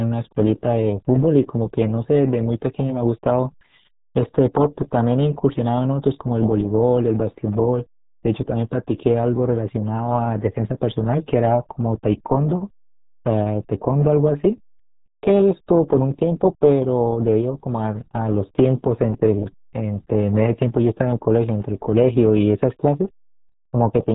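From start to finish, the speech has been squeezed through the RealAudio 14.4 codec, a dial-up-era coder whose tiny data budget fits an 8 kbit/s rate. Everything above 3.8 kHz is cut away, leaving the speech muffled, with a heavy, gargling smear on every sound.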